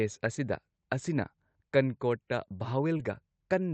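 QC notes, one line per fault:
2.97–3.01 s, short concealed packet loss: about 20 ms of the speech did not reach the decoder in time, and the receiver covered the gap by extending the preceding sound, following its pitch if voiced or as shaped noise if not, for about 19 ms before blending back into the real signal. The result is a brief smear or wobble near the end of the clip, heard over a call path whose top end stops around 8 kHz.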